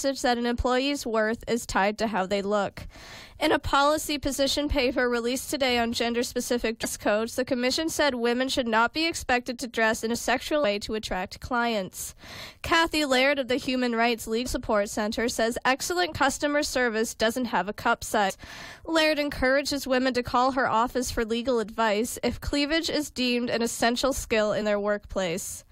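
Brief chirps or blips break into the sound at 6.84, 10.63, 14.45, 18.29 and 24.61 s, each lasting under 20 ms. This is damaged data in a compressed stream: corrupted bytes made the decoder misread frames, lose sync and hunt for the next frame header.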